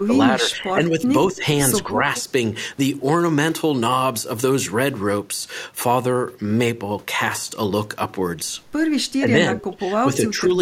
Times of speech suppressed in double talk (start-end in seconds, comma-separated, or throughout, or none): 0.00-1.05, 1.32-1.43, 1.83-2.06, 9.12-10.54